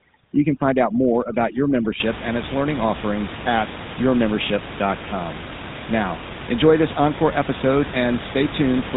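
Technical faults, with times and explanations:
Throughout: GSM full-rate codec. The sound has a buzzy, gravelly roughness, because the codec rebuilds it from a vocal-tract model driven by a coarse, regularly spaced pulse excitation, discarding most of the fine detail. The damage is plainly audible and fits the 13 kbps GSM full-rate codec. On a spectrogram, energy stops at a hard ceiling near 3.8 kHz across the whole clip, and harmonics look smeared and grainy instead of cleanly striated.
0.0–2.0 s: overdone noise removal. Just before "and its learning offerings", a noise reducer set far too strong gates individual frequency bands down whenever they sit near its noise estimate, taking quieter parts of the speech with them. The room noise, about 11 dB below the speech, drops and breaks up into twinkling specks. A spectrogram shows scattered isolated musical-noise dots in the gaps and ragged, hollowed-out speech harmonics, and the waveform's noise floor drops.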